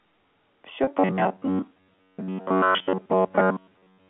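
At 0.84 s, audio went missing for 30 ms, which fits three lost 10 ms packets. Packet loss with pitch repetition bridged the gap by looping the last pitch period, so the speech briefly holds on a slightly buzzy note. A second loss of 20 ms, fitting two packets, does the same at 3.28 s. From 0.97 s to the end, new audio likely arrives too seldom, and the receiver repeats chunks of about 10.6 ms while skipping most of the real signal. This robotic sound from repeated short buffers forces a rigid, metallic buzz near 94 Hz over the G.711 telephone-band speech.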